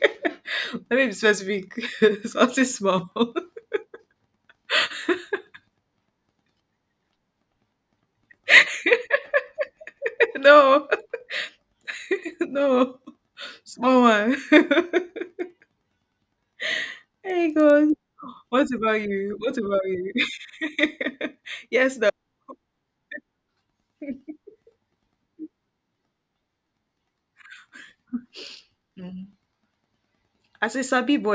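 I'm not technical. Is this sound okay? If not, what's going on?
No. From about 15.2 to 17.9 seconds the speech carries a steady ticking, ten times a second, that stops in the gaps between sounds. This is a resampler restarted on every block: the audio was converted to a lower sample rate in 100 ms chunks, each handled separately, so every chunk edge came out slightly wrong. Those edge errors repeat at the chunk rate, giving a regular tick.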